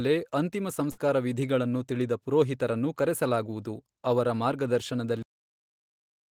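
At 0.91 s the speech is hit by a burst of packet loss lasting until 0.99 s, just before "ವಿಧೀಗಳನ್ನು ತಿಳಿದ ಪುರೋಹಿತರನ್ನು ಕರೆಸಲಾಗುವದು". About 60 ms of audio never arrived in time, and the receiver bridged the hole by extending the last sound it had and fading it down, so that stretch is a smeared, decaying continuation rather than real signal. When playback picks up again, roughly 60 ms of the original has been skipped.

At 5.23 s the clip has a cut-off end: the audio stops abruptly mid-sound and falls straight to digital silence with no natural decay, which points to the final buffers never being written out. Nothing follows for the remaining second or so of the file, so the tail of the utterance is simply absent rather than trailing off.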